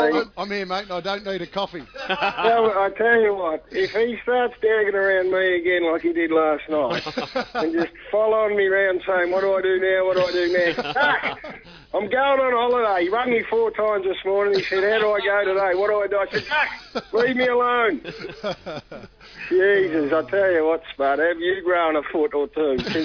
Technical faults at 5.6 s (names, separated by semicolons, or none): none